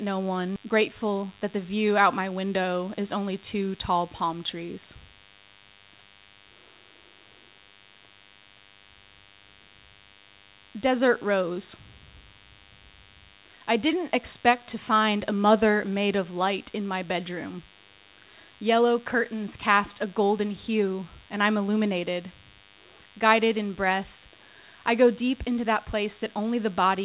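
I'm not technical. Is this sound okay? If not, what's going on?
No. A low, thin buzz sits under the speech for the whole clip, like a faint electric hum with a rough, raspy edge, clearly quieter than the voice but always there. This is DECT cordless phone buzz. A cordless phone or its base station nearby sends a short radio pulse 100 times a second, and the recording equipment picks it up and turns it into sound, giving a steady 100 Hz buzz with many overtones.

Right at the start, at 0.56 s, the speech suddenly jumps forward with no pause, as if a small piece was snipped out and the two ends glued together. This is a skip ahead. Roughly 0.4 seconds of audio was dropped, so playback leapt forward, and whatever was said in that gap is simply gone.

Just after that, from 0.66 s to 1.77 s, the talking sounds slightly rushed, about 8 percent faster than normal, though the voice's pitch stays the same. 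This is a jitter buffer speed-up. The receiving end still had more audio queued than it wanted, so it quietly cut many tiny slivers out of the speech, about a tenth of a second in total, to shorten the delay.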